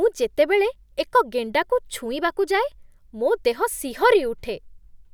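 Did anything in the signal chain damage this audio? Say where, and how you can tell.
No, nothing damaged this audio.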